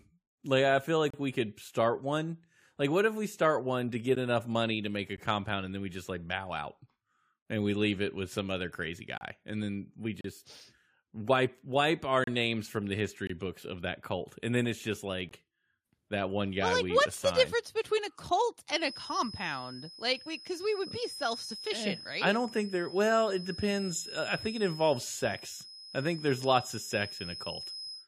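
Eight short holes of silence break the speech: 1.10 to 1.14 s, 4.15 s, 5.17 s, 9.18 to 9.21 s, 10.21 to 10.25 s, 12.24 to 12.27 s, 13.27 to 13.30 s, and 15.29 to 15.31 s. Each is a gap between stream segments. They land near segment boundaries, which fits 1-second segments. The timestamps of neighbouring segments fail to meet. The player pads the difference with silence. The holes last from 12 to 36 ms and have hard edges. No speech is lost.

From 18.74 s to the end, a thin, steady tone sits behind the speech. It is a feedback whistle at 5.1 kHz. It stays about 15 dB below the speech and swells and fades slowly in level. The likely cause is a loudspeaker-to-microphone loop held right at the edge of feedback. One frequency keeps ringing but never runs away.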